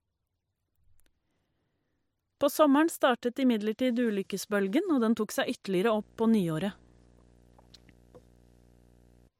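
Right after "og den tok seg", at 5.90 s, a video or display buzz comes in and runs to 9.28 s. A screen or video cable is leaking into the audio path, giving a 60 Hz field-rate buzz with hash on top, sitting well below the speech, around 35 dB down.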